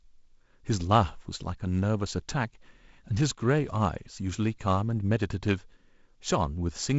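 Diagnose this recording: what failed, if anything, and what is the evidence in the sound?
Nothing has failed: the speech has been through G.722 wideband telephone coding at 48 kbit/s, which leaves no content above about 7.7 kHz and only the light graininess expected when that mode takes bits away from the lower band.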